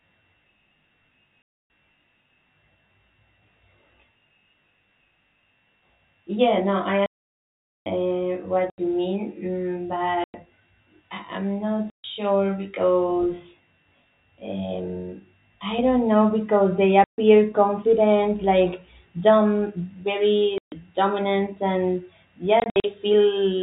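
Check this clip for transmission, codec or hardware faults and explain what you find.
Two faults are present in this speech: channel delay with comb filtering, and packet loss filled with silence.

From 0.0 to 15.79 s there is channel delay (comb filtering). One channel lags by around 20 ms, and the mono sum cancels at evenly spaced frequencies from about 30 Hz upward, which makes the sound rough or slightly doubled.

Packet loss filled with silence cuts hard-edged gaps into the speech. The gap lengths are multiples of 20 ms, which fits 20 ms packets.
1.42 to 1.70 s: 280 ms gap.
7.06 to 7.86 s: 800 ms gap.
8.70 to 8.78 s: 80 ms gap.
10.24 to 10.34 s: 100 ms gap.
11.90 to 12.04 s: 140 ms gap.
17.04 to 17.18 s: 140 ms gap, between "because they" and "confident like".
20.58 to 20.72 s: 140 ms gap, just before "dominant and".
22.60 to 22.84 s: 140 ms of loss scattered across 240 ms, with the longest run 60 ms. 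This comes right after "dominant and".

The G.711 telephone coding limits the audio to below 4 kHz and adds at most faint quantisation noise.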